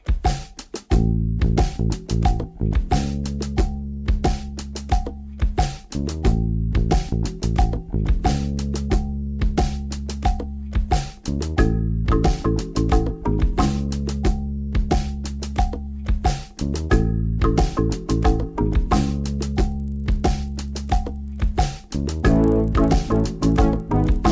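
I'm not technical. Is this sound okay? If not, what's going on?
No. From 19.44 s to the end, a faint buzz sits on the sound, repeating 25 times a second. This is a resampler restarted on every block: the audio was converted in 40 ms pieces, each handled alone, leaving a tiny glitch at every seam.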